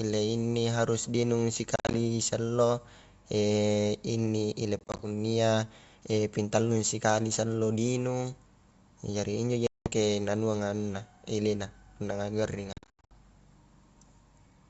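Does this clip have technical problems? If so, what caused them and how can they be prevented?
Yes. Packet loss on an ADPCM call leaves hard-edged gaps at 1.76–1.95, 4.79–5.03, 9.67–9.93 and 12.73–13.14 s. Afterward the decoder's predictor and step size no longer match the sender's, so sound resumes slightly distorted. Packet loss concealment, forward error correction, or a cleaner network path would prevent this.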